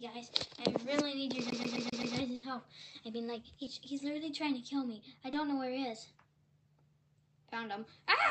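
At 1.50 s the audio catches like a CD stuck on one turn: the same slice of about 0.13 s plays five times over, with a tiny mute at each jump, until it breaks free at 2.16 s. That's the laser being thrown back a track at the same spot on every revolution. The evenness of the repeats is the giveaway, giving that quick, mechanical stutter rather than a random glitch.

Right after, from 2.35 to 2.45 s, there's a burst of packet loss. About 80 ms of audio never arrived in time, so the receiver kept extending the last bit of sound and fading it down to cover the hole. You hear that as a brief held, dimming tail. When things pick up again, the audio has jumped ahead and roughly 80 ms of material is simply gone.

Then there are two quick cases of short concealed packet loss, at 3.65 to 3.69 s and at 5.31 to 5.35 s. Each time, about 20 ms didn't reach the decoder, and the receiver papered over it by continuing the preceding sound before blending back in. 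They come across as little smears or wobbles rather than gaps. All of this rides on the call path's Opus coding, which tops out around 8 kHz, so the whole thing sounds a bit dull up top.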